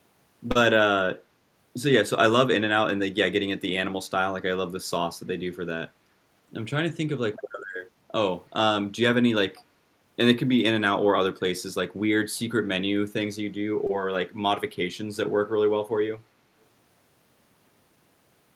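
At 0.51 to 0.57 s, and again at 13.87 to 13.91 s, the speech shows short concealed packet loss: about 40 ms and then 20 ms of audio arrived too late, and the decoder extended the preceding sound before blending back, leaving a brief smear.

At 9.56 to 9.64 s a faint delayed copy of the speech surfaces, about 0.33 s behind and roughly 30 dB down. This is likely echo leak, a loudspeaker's output getting past the far end's echo canceller and returning down the line.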